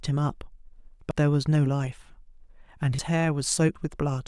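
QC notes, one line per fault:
1.11 s, 2.99 s, 3.76 s: dropped buffer (overrun). At each spot the speech jumps forward abruptly, with no gap of silence, as though about a tenth of a second of the utterance were cut out and the two sides spliced together. The likely cause is the recording software failing to read its samples in time, so the hardware overwrote that stretch before it was collected, leaving a hard join where the lost audio should be.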